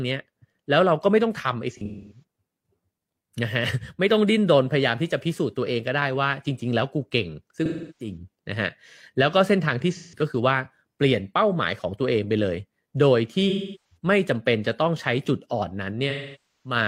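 AAC frame loss with concealment hits the speech at 1.71, 7.65, 9.93, 13.49 and 16.10 s. The decoder patches the gaps from earlier spectrum, giving smeared, phasey dropouts of about 0.17 to 0.5 s.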